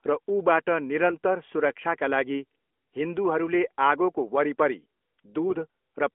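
A brief hoarse, scratchy gargle cuts into the speech from 1.10 to 1.17 s, between "र ऊबाट" and "सुरक्षाका लागि", and again from 5.47 to 5.55 s, with pitch and loudness roughly held. These are AMR bit errors: a few percent of the less protected bits in the narrowband mobile stream, around three or four 20 ms frames, arrived flipped. This misplaced the excitation pulses and skewed the fine pitch, gain and spectral values, while the phone-band codec carries the rest.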